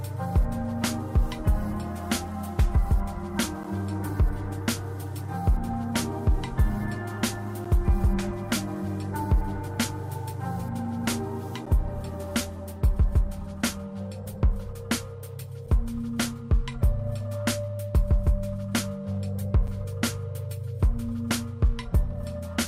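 Brief hard-edged dropouts to silence cut into the sound at 3.63, 7.64, 11.66, 15.67 and 19.67 s, a steady four-second rhythm. Each hole is short, about 11 ms for the first two and shrinking to about 9, 7 and 6 ms. This is a gap between stream segments: the timestamps of consecutive 4-second segments don't quite meet, so the player pads the mismatch with silence. Nothing is removed, only briefly interrupted.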